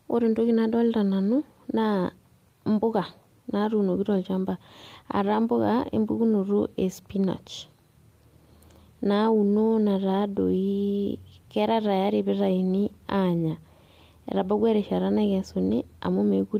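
No technical faults can be heard anywhere in the recording.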